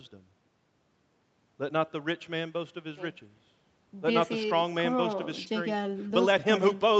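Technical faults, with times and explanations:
Nothing here counts as a fault: the speech just has the usual narrower sound of a call, with nothing above about 8 kHz, which is what the call's microphone processing and codec would give.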